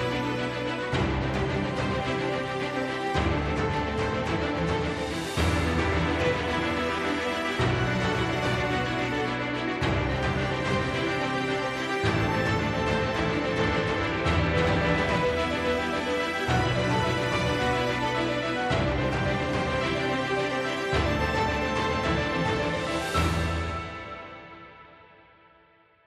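A doubled audio track runs from 13.6 to 15.16 s: a dry, full-band copy at roughly equal level trails by about 300 ms, likely from a second, slower capture path.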